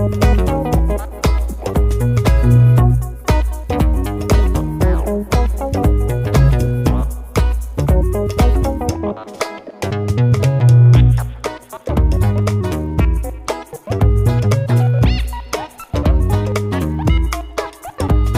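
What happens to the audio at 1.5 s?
At 1.5 s the audio plays through intact, with no audible fault at that moment.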